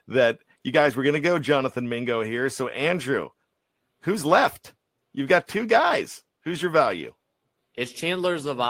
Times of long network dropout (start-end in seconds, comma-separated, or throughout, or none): none